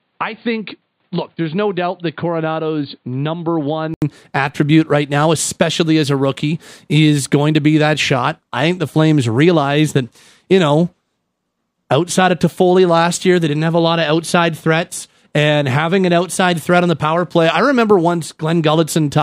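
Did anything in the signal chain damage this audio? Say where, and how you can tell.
Yes. At the capture stage, the input likely switched from a poorer device at 4.0 s. Before then the speech is dull and about 5 dB quieter, with nothing above 4.6 kHz, and an 80 ms gap marks the switch.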